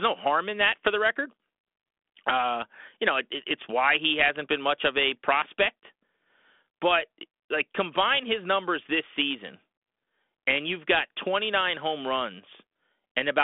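No technical faults are audible.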